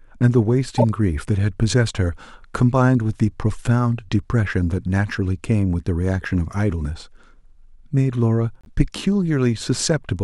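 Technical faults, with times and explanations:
0.78–0.84 s, 6.22 s, 8.61–8.68 s: corrupt frame decoded. Damaged frames played with misread gains spray stray energy, causing blips: first loud, others faint.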